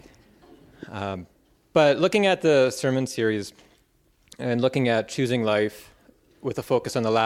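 Nothing stood out on listening to this audio.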